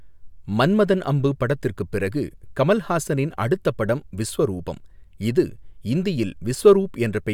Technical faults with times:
none

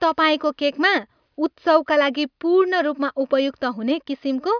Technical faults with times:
none

